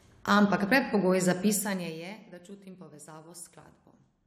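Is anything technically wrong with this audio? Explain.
Yes. From 1.50 to 2.13 s a fast ticking buzz rides on the speech while it drops by roughly 20 dB. This is zipper noise: the gain falls in around a hundred unsmoothed steps a second, each one clicking.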